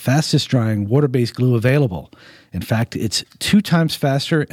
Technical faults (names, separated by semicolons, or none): clock drift buffer slips